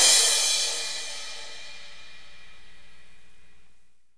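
No technical faults can be heard in this clip.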